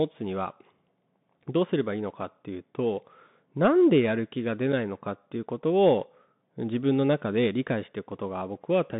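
It's a speech clip run through a Bluetooth CVSD headset codec the whole way through, and the damage is easy to hear. The band sits at roughly 150 Hz to 3.7 kHz with nothing above 3.8 kHz, which fits 64 kbps CVSD. Since each sample is just a one-bit up-or-down step with adaptive size, loud bright sounds outpace the step and distort, s sounds come out scratchy, and a granular hiss rides underneath the speech.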